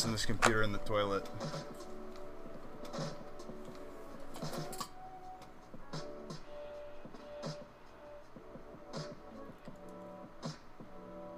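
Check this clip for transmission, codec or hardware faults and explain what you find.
There's one fault. A doubled audio track runs from the start until 4.78 s: a second, equally loud copy trails about a second and a half behind, likely from a slower second capture path, and it cuts off abruptly.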